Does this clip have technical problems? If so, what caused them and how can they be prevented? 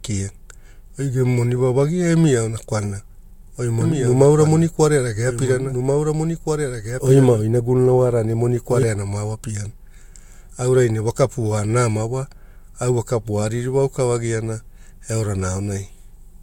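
Yes. Throughout the clip, the speech has nothing above about 16.6 kHz and carries two overlapping kinds of compression artefact. This points to transcoding between lossy codecs, likely an MP3 stage at around 96 kbit/s re-encoded to Vorbis at around 64 kbit/s, each stage adding its own damage. Prevent it by encoding once from the original source.

From 3.81 s to 8.83 s, just before "mao apiana", a doubled audio track appears. A full-band copy trails by about one and a half seconds, around 5 dB quieter, with no reverberant tail, and starts and stops abruptly. A slower second capture path or a misaligned duplicate in the edit is the likely cause. Prevent it by routing each source to the recording only once and checking edits for stacked duplicate regions.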